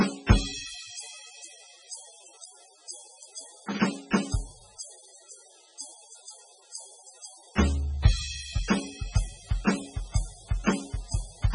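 From start to end, the music carries heavy MP3 compression damage. Nothing sounds above 10.6 kHz, so the treble is cut flat. Weak detail flickers in and out, giving a watery, swirly texture and smeared attacks. This likely reflects a very low bitrate near 16 kbps.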